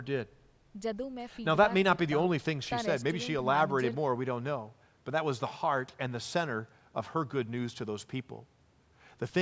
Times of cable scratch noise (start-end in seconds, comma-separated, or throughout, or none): none